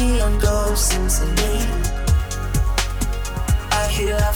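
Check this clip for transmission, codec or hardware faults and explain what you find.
From 2.14 s to the end, the audio shows low bit depth without dither, likely from truncation to something like 7 bits. The rounding error tracks the signal, leaving grainy, signal-dependent distortion roughly 30 dB down. The waveform shows visible stair-steps, and the spectrogram shows harmonic grit smeared above the content.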